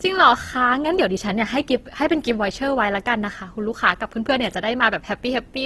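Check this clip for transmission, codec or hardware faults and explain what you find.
There is one fault, present for the whole clip: Opus compression damage, plainly audible on the speech throughout. The cause is likely a low-rate Opus encode in its CELT (music) mode, with the grain suggesting roughly 16 kbps. Short of bits, the encoder keeps each band's energy but fills the fine detail with folded or noise-like content, so voiced sounds turn rough and grainy rather than swirly. A spectrogram shows nothing above 12.2 kHz and smeared, noisy harmonics below; the waveform looks unremarkable.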